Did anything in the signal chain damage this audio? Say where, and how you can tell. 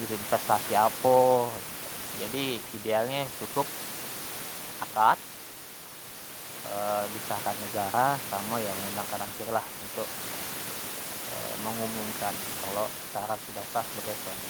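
No, nothing in the chain shows any damage, and the room noise sitting about 15 dB under the speech belongs to the recording space, not to any stage of the system.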